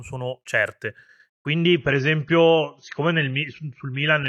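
An adaptive stream at a lower bitrate takes over at 1.46 s and runs to the end of the speech at 4.28 s. The connection slowed, so the player switched to a leaner encoding without a gap. The shift is abrupt: the treble vanishes above 6.6 kHz, sibilants dull, and coding artefacts thicken. That points to an AAC stream dropping from around 96 kbit/s to under 30 kbit/s.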